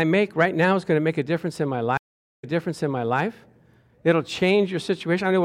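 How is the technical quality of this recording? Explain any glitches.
The recording has one clear glitch, a stream reconnect between 1.97 and 3.20 s. The connection dropped and the player fell silent for 414 ms, then reconnected and started a new decoder mid-stream. The server resent a burst, so the speech resumes 810 ms earlier and a stretch is heard twice, entering with a brief muted or faded onset. A waveform shows a flat gap, then a small ramp-up. A spectrogram shows a blank band, then a repeat of the patterns just before it.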